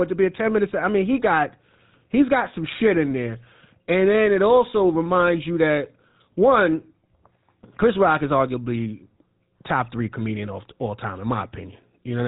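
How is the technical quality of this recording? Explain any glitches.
The recording is marred by codec damage from start to finish: the speech has passed through the GSM full-rate codec, and the effect is plainly audible throughout. The codec rebuilds speech from a vocal-tract model excited by coarsely spaced pulses, so fine detail in the excitation is lost, and the result is a buzzy, gravelly roughness. Nothing survives above 3.8 kHz, and the coarseness fits a bitrate around 13 kbps. A simple telephone-band filter would sound muffled but smooth; this grainy buzz within the band marks a codec.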